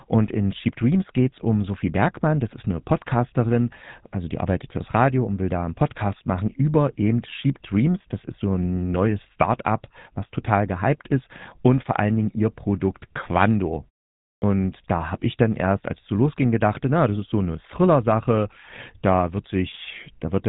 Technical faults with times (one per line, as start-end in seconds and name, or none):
0.00-20.48 GSM full-rate codec
14.36-14.42 clipped start after a pause